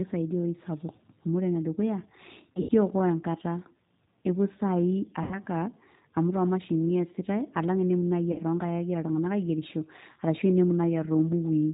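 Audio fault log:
Throughout: G.729 codec. Speech is rebuilt from a vocal tract filter, a pitch predictor and sparse pulses, which fits an 8 kbit/s G.729A stream. The result is plainly rough and synthetic. On a spectrogram, energy stops flat at 4 kHz, with coarse, grainy harmonics below.
2.54–2.71 s, 5.23–5.39 s, 8.32–8.41 s: VoIP packet loss concealed by the speech codec. In the first, 100 ms is lost across 160 ms, with the longest gap 80 ms. Then 80 ms and 60 ms are lost. The decoder repeats its last pitch and filter at falling gain, so the sound becomes a fading buzzy tone. Because each frame builds on the last, the sound stays weak just afterwards. On a spectrogram, frozen horizontal harmonic streaks fade out. In the waveform, a dwindling periodic envelope precedes a subdued recovery.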